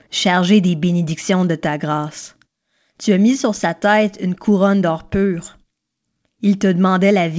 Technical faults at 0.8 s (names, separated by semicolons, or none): none